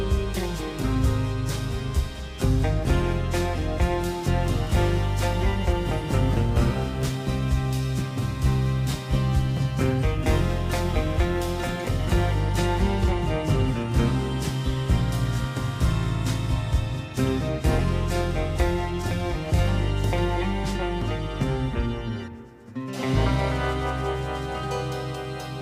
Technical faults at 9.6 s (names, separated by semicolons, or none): crude rate conversion